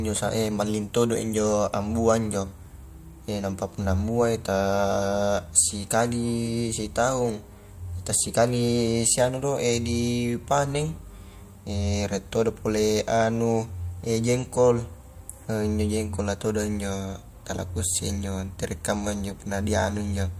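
No technical faults can be heard anywhere in this speech recording. There is nothing in it that calls for a timestamp or a fix.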